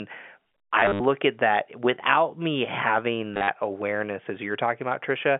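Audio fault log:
0.8–1.0 s, packet loss with last packet repeated: just before "at that without me", about 150 ms goes missing in scattered gaps across 200 ms, the longest 70 ms. The receiver replays the last packet, so runs buzz near 100 Hz, which fits 10 ms packets.
3.34–3.48 s, packet loss with last packet repeated: right after "that without me having", about 110 ms drops out across 140 ms, the longest run 50 ms. The repeated packets seldom line up with the pitch, giving a brief robotic stutter over the narrow telephone band.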